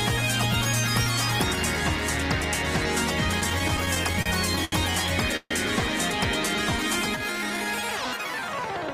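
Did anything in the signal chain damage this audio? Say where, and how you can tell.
Yes. At the digital interface, word clock ticks run from 0.27 s to 8.85 s, roughly once a second, about ten in all. The receiver isn't locked to the sender's clock, which is off by something like 20 ppm. Each slip drops or repeats one sample, giving a sharp tick.

On the network side, repeated stalls (stutter) run from 3.40 s to 4.74 s. There are twelve short gaps, together 217 ms, the longest 74 ms. Packets arrived late and the jitter buffer kept emptying. The receiver stretched the last sound each time. Nothing is lost, but the audio drags.

A call audio freeze sits at 5.36 s to 5.53 s. The sound holds as a fading continuation for 141 ms, the last 50 ms silent. Then it resumes where it stopped. The likely cause is packets held up in transit, draining the jitter buffer.

A jitter buffer slow-down runs from 6.49 s to 7.65 s. 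The audio plays at 90% speed with pitch unchanged, and 124 ms is added. The receiver repeated single pitch periods and bits of pauses to rebuild its reserve. Sounds are drawn out.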